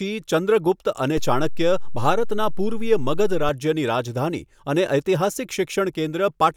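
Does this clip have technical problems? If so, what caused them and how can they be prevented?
Yes. A DC step occurs at 1.17 s, where the waveform's zero line jumps by about -20 dBFS, holds, then steps back at 3.49 s. Each jump produces a low thump while the speech continues unchanged. A DC-blocking high-pass filter ahead of the converter, plus avoiding input switching or recalibration mid-recording, prevents it.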